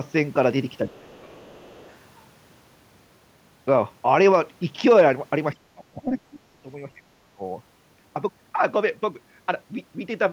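From 0.86 to 1.5 s the speech sinks sharply, by roughly 25 dB at its deepest, across about half a second, and the same speech suppressed in double talk returns from 5.54 to 6.68 s and briefly from 7.21 to 7.42 s, both dipping by roughly 30 dB. The likely cause is an echo canceller that, with both sides talking, could not tell this talker from loudspeaker echo and attenuated everything. The waveform shows the envelope pinched nearly flat, and the spectrogram shows the harmonics fading to faint traces.

Right after the first dip, from 1.49 to 1.9 s, a second voice from the other side leaks through, very faint, at about 30 dB below the main speech. It was likely loudspeaker sound the echo canceller failed to remove from the microphone. On a spectrogram it appears as weak, separate harmonic striations, with barely any rise in the waveform.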